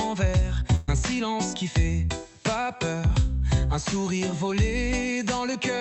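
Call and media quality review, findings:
Burst of packet loss, 0.75 to 0.89 s. Symptom: sound freezes into a held, fading tail for about 120 ms, then resumes slightly further on. Component: jitter buffer and concealment. Mechanism: consecutive packets lost or late; receiver stretches and attenuates the last frame, skipping the missing span. Opus call path audible, with high end stopping near 8 kHz.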